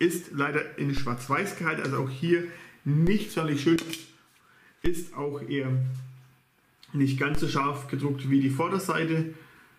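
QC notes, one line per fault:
0.97, 3.07, 4.86, 7.35 s: DC step, the zero line jumps by about -21 to -19 dBFS and then decays back slowly. Each jump is heard as a low thump or click under the sound. On the waveform the trace visibly shifts off centre, and the spectrogram shows a brief broadband smear at the bottom at each time.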